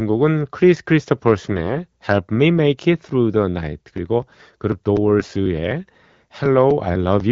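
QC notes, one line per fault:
1.52–1.75 s and 5.20–5.32 s, AMR bit errors: short bursts where the speech keeps its pitch and loudness but turns hoarse and gargly, worse in the second burst. Flipped low-priority bits, at a rate of a few percent, misplace the excitation pulses and skew the fine gain and spectral values. On a spectrogram the harmonics smear into noisy, ragged bands with stray energy between them. The waveform envelope stays roughly intact while its fine detail looks jagged.
3.73–7.20 s, periodic USB or driver dropouts: a steady train of ticks every 0.25 s or so, about 15 in all, heard only where there is signal. At each one, roughly 2 ms of audio is skipped outright rather than filled with silence, so the waveform jumps at a splice point. On a spectrogram these show as thin, evenly spaced vertical broadband lines that fade out in pauses. The AMR wideband (HD Voice) codec band limit near 7 kHz sits above them.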